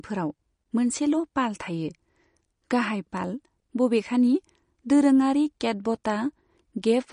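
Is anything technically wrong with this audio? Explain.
Yes. Throughout the speech there is nothing above 10.1 kHz, and the sound is watery and swirling, which points to likely MP3 compression at a low bitrate near 40 kbps. Short of bits, the encoder cuts the treble and drops weak frequency lines frame by frame.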